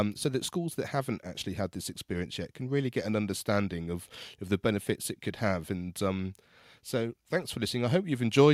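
No technical faults can be heard anywhere in this speech recording. There is nothing that needs a timestamp or further comment.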